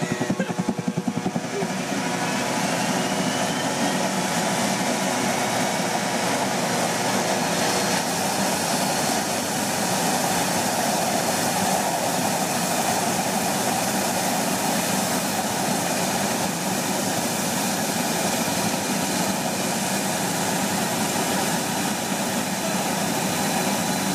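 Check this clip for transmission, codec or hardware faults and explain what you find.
No transmission, codec or hardware faults turn up in this clip.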